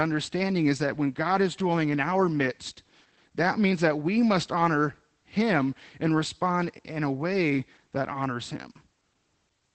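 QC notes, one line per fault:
Throughout: Opus voice compression, plainly audible on this speech. At about 12 kbps the SILK coder limits it to wideband, so the spectrogram shows nothing above roughly 8.4 kHz. The coarsely coded excitation in 20 ms frames makes the voice sound muffled, hoarse and faintly robotic.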